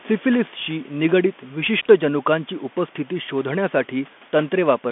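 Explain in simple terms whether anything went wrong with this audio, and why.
Throughout the speech, it sounds thin, muffled and phone-like, with scratchy s sounds and grainy hiss. The Bluetooth CVSD headset codec discards everything above 3.5 kHz.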